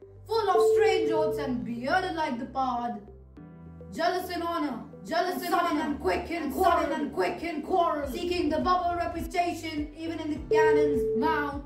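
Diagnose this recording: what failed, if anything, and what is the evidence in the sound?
A doubled audio track runs from 4.72 s to 9.26 s. A second full-band copy trails by about a second, at roughly equal level, with no decay or room colour. It starts and stops abruptly. This likely comes from a duplicate capture path or editing overlap.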